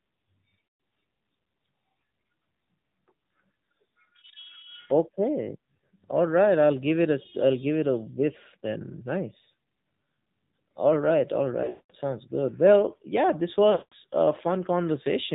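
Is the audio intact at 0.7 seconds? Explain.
No. At 0.70 s radio errors corrupted a run of AMR speech frames, so they failed their checksum and the decoder had to conceal them. This is the lost AMR speech frames fault. The decoder repeated the last good pitch and vocal tract settings while lowering the gain. The sound is drawn out into a smeared, held tone that fades toward silence over roughly 140 ms, which fits a run of about seven lost 20 ms frames. The speech then returns weak and rough for a moment.

Underneath this, the whole passage is carried by the AMR narrowband mobile codec at 7.4 kbps. The signal is sampled at 8 kHz and rebuilt from a vocal tract model driven by a few pulses per subframe, so nothing above 4 kHz survives. At this low bitrate the damage is plainly audible: the speech sounds muffled, buzzy and synthetic.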